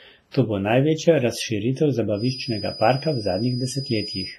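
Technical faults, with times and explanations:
Throughout, WMA compression: heavy codec damage and nothing above 15.4 kHz, which fits a 24 kbps WMA 1 encode, likely leaving ringing, washy speech with signal-following hiss.
0.31–0.34 s, pre-echo: quantisation noise from the following attack spills about 33 ms ahead of it, so a short hiss precedes the onset and softens it.
2.12 s to the end, feedback whistle: after "bo največja razširitev" a 4.9 kHz tone at one pitch sits roughly 15 dB below the speech, swelling and fading slowly, likely from a loudspeaker-to-microphone loop held just short of howling.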